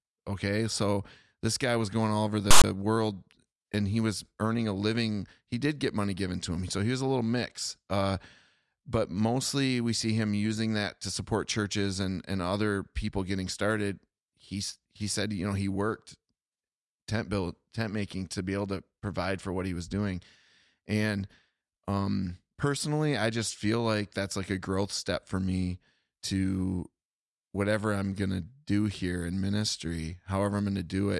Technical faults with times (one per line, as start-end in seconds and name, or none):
2.51-2.64 file tags played as audio